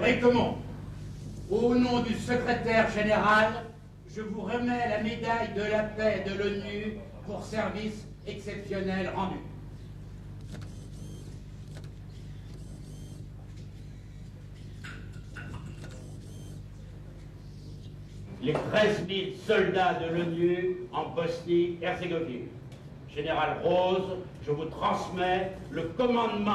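Nothing technically wrong can be heard in this audio. No fault turns up at any point, so there are no times or causes to give.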